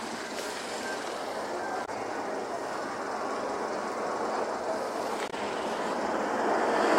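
At 1.82 to 1.89 s and again at 5.27 to 5.34 s there's a short blip, damaged data in the compressed stream. The decoder hits bad bytes, misreads those frames, loses sync and has to hunt for the next good frame header.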